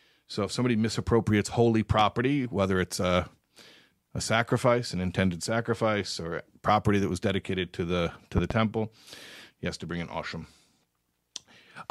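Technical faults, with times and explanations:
1.99–2.03 s and 8.38–8.54 s, loud pops: a single pop about 10 dB above the speech, then a double pop about 15 dB above it, likely from an electrical voltage pulse. Speech continues underneath. Each shows as a tall waveform spike and a vertical broadband stripe on a spectrogram.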